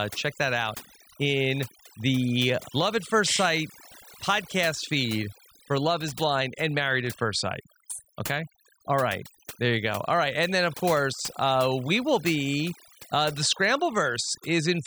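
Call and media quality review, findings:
Overdone noise removal, throughout. Background pulled to near silence with twinkling specks between phrases. Noise suppressor set too aggressive. Bands near its noise estimate are cut hard or dropped, taking quiet speech detail with them.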